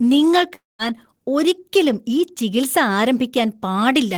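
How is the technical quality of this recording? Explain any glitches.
The recording has one glitch, early on, where the sound breaks off and returns.

A long network dropout runs from about 0.55 to 0.82 s. The likely cause is that audio stopped arriving and the receiver kept extending the last sound to cover the gap. It comes out as a fading buzzy continuation, followed by roughly 180 ms of near-silence. The speech then resumes with about 240 ms of it simply gone.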